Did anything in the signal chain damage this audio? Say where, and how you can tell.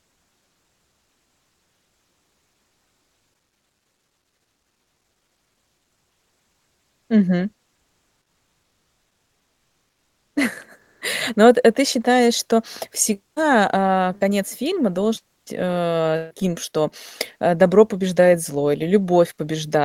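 Yes. The damage sits in the call processing, at the codec stage. From 10.81 to 11.01 s, about 200 ms, the real background drops out and is replaced by comfort noise. That noise is steady and featureless. The background sits about 53 dB below the loud parts, and the level shifts by about 9 dB. The likely cause is Opus discontinuous transmission. The sender stops coding during the pause, and the receiver synthesises noise. The band stays limited to about 12 kHz throughout.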